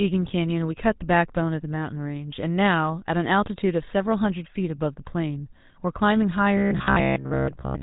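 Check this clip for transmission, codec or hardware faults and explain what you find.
Two faults are present: codec damage throughout, and a robotic buzz near the end.

GSM full-rate codec, throughout: the speech has the gravelly, buzzy roughness of that codec, with nothing above 3.9 kHz, which fits 13 kbps GSM. The vocal tract is modelled and excited by regularly spaced pulses, discarding much of the excitation detail.

Robotic sound from repeated short buffers, 6.58 to 7.82 s: the speech turns into a rigid metallic buzz at about 67 Hz that still roughly tracks the speech. The likely cause is audio arriving too slowly, with the last 15 ms replayed repeatedly and most of the real audio skipped.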